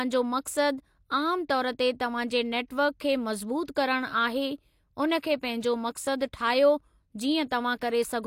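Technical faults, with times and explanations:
3.65 to 3.68 s, pre-echo: the transform codec spread quantisation noise across a whole block, so noise sized for a sharp speech attack also filled the quiet 29 ms before it. A brief hiss precedes the onset, which sounds softened and smeared.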